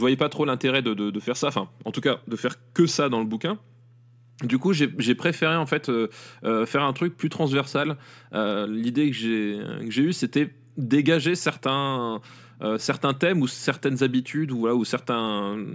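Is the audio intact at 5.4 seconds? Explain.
Yes, the speech at 5.4 seconds plays through intact, with no dropout, click, distortion or other fault at that moment.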